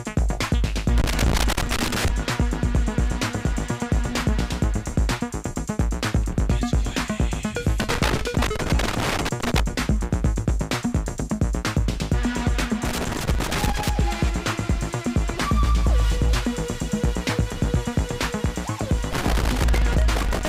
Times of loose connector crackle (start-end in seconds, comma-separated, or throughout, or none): 0.98-2.09, 7.80-9.60, 12.85-13.89, 19.13-20.49